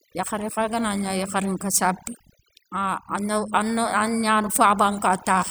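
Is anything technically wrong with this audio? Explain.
Yes. Throughout the speech there is overdone noise removal: a noise reduction stage was set far too aggressively on a noisy recording. Each frequency band that came close to its noise estimate was pulled right down or switched off, and the quieter parts of the speech fell below that threshold too. As a result, the gaps between phrases drop to an unnatural near-silence sprinkled with twinkling specks.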